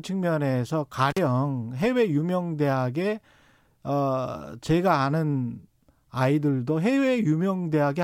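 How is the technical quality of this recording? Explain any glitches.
There is one glitch in this speech recording, an intermittent contact from 1.1 to 1.18 s. A loose plug or cable connection briefly opens, dropping the signal for roughly 43 ms. The sound cuts out with crackle at both edges, leaving faint hiss during the gap.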